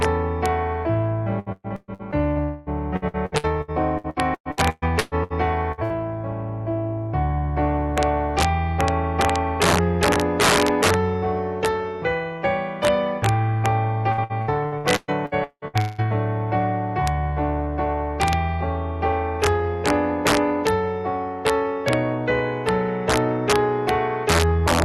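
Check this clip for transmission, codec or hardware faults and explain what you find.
Several faults are present: integer overflow across the whole clip, and packet loss in several forms between 1.39 s and 16.01 s. The audio passes through an Opus call path, and its top end stops near 12 kHz.

Integer overflow runs throughout. On the loudest peaks the signal is driven about 7 dB past full scale. Only a small fraction of samples go over. Those samples are not limited. They wrap to the opposite extreme. Each one becomes a hard, violent crack, far sharper than clipping.

Repeated packet loss (robotic sound) appears three times. The first stretch runs from 1.39 to 2.39 s, with six gaps. The longest lasts about 119 ms. The second runs from 2.96 to 5.33 s, with twelve gaps. The longest lasts 125 ms. The third runs from 14.12 to 16.01 s, with ten gaps. The longest lasts 188 ms. Each hole is filled by extending the last sound. 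Between 38 and 48 percent of each stretch is patched this way. The result is choppy, with pieces missing.

From 2.42 to 2.69 s the sound becomes a continuous synthetic fill for about 240 ms. It never drops to silence. Afterwards the audio resumes further on, and that stretch is gone. This is likely a long network dropout. No audio arrived, so the receiver stretched the last sound across the gap.

Two short bursts of packet loss follow closely. One runs from 5.72 to 5.81 s and the other from 5.84 to 5.93 s. Each loses about 60 ms. The receiver holds the last sound in each gap. It turns the held sound down, so it becomes a brief fading buzz or hiss. The audio then jumps ahead, missing the part in between.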